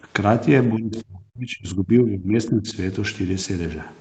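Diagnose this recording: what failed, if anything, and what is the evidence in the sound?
Call processing failed at the echo canceller. From 0.71 to 2.34 s the speech sinks in uneven pieces, by about 30 dB at worst, then dips by about 15 dB from 2.5 to 2.76 s. Likely speech suppressed in double talk: the canceller mistook near-end speech for echo and attenuated it.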